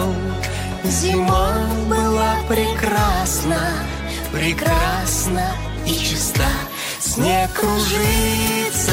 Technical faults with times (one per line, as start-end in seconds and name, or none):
none